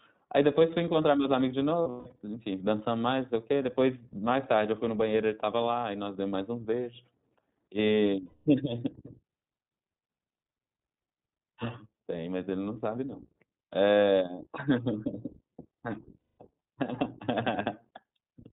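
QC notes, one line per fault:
throughout, iLBC codec: narrowband, nothing above 4 kHz, with a rough, slightly synthetic edge, consistent with iLBC at about 15.2 kbps coding each 20 ms frame independently.
1.82–2.20 s, 8.26–8.47 s, 16.18–16.38 s, lost iLBC frames: held, buzzy vowel-like fills as the decoder repeats the last pitch cycle mixed with noise. The first loss totals 240 ms scattered across 360 ms, with the longest run about 150 ms. The later two are each a 200 ms gap, with clean recovery right after.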